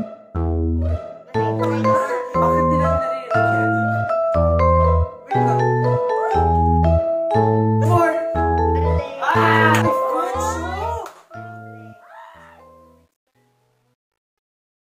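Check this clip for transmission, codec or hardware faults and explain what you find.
There's one real fault, and it sits on the fade-out at the end. From 9.74 s to 14.94 s you get truncation distortion on a fade. The fade stage is dropping low bits with no dither, so as the level sinks the waveform collapses onto coarse steps, which fits a word length of around 11 bits. It turns gritty, and it is worst from 11.88 s to 14.94 s.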